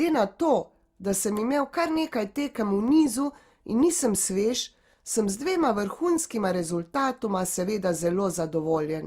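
CD scratch ticks appear from 2.88 to 3.91 s: five short clicks, each under a millisecond, recurring about four times a second. A surface blemish hit the same spot on each disc revolution, beyond error correction, so the player patched or muted those samples.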